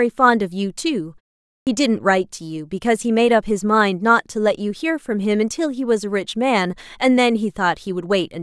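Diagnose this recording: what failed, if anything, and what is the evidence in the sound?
The playback device went to sleep during a 0.51 s pause and had to wake or relock before it could output sound again. That is a clipped start after a pause. At 1.63 s the audio resumes abruptly out of silence, and about 38 ms of its onset, running to 1.67 s, is missing. The attack is swallowed, so the speech begins without its first sounds instead of building naturally from the quiet gap.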